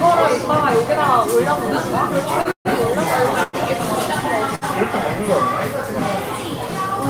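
At 2.41 s a short stall from a late packet holds the current sound for about 38 ms. The receiver's jitter buffer ran dry, so it stretched the last bit of audio until the packet arrived and then resumed from the same point. It sounds like a slight catch or buzzy smear. On a spectrogram the partials run on as flat horizontal bands, and in the waveform one cycle shape repeats.

From 2.51 to 2.68 s comes a call audio freeze, likely caused by packets delayed in transit. The held sound buzzes, fades, and drops to about 90 ms of silence before the audio picks up where it stopped, 138 ms late. A second freeze at 3.43 to 3.56 s adds about 102 ms as a fading hiss with no silent stretch. On a spectrogram each freeze shows as smeared bands thinning out, the first ending in a blank vertical gap. In the waveform the amplitude tapers away.

At 4.55 s a second short stall from a late packet extends the sound by about 62 ms. 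It shows the same flat, repeated texture and a brief dip in level.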